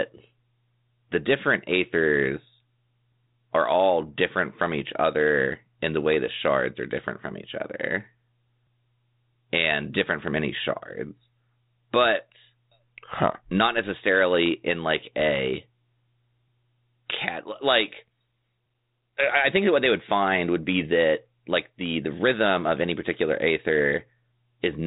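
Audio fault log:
No faults are present; the speech comes through a 32 kbit/s G.726 ADPCM path that behaves as expected for that codec, with light coding roughness and nothing above about 3.8 kHz.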